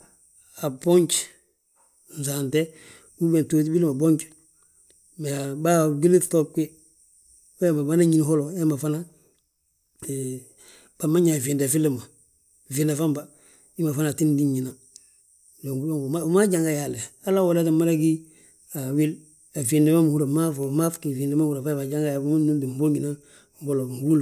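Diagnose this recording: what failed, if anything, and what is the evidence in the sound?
Nothing failed: no stage of the chain, from the analogue wiring and converter through processing, transmission, storage and playback, leaves an audible trace in this speech recording. There is no event to time and no mechanism to explain, so there is nothing to diagnose.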